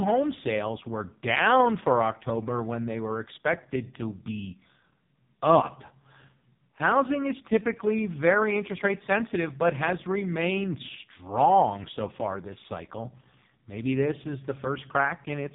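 From start to finish the speech carries the sound of an AMR narrowband mobile codec. Everything above 3.8 kHz is gone, and the voice is heavily buzzy and synthetic, which fits the lowest AMR-NB mode of about 4.75 kbps, where too few pulses drive the vocal-tract model in each 5 ms. On a spectrogram the energy stops at a flat ceiling near 3.8 kHz, and the harmonics below it look smeared and coarse.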